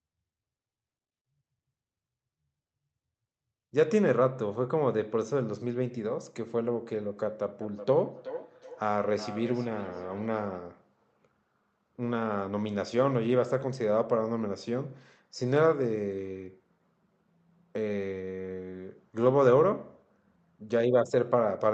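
Feedback echo between two devices from 7.61 to 10.63 s: a nearby device replays the speech, the mic catches it again, and it returns roughly every 0.4 s, about 16 dB down.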